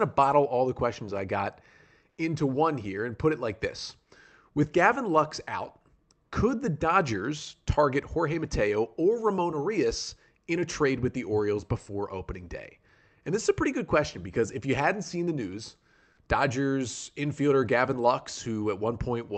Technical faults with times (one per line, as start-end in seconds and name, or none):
2.09-2.17 comfort noise in place of the background